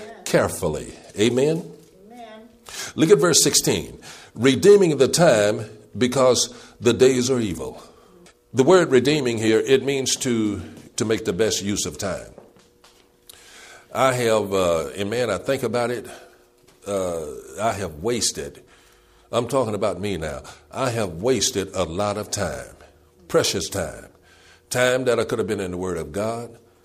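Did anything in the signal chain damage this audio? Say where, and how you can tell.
No, nothing in the signal chain stood out as having damaged this audio on listening.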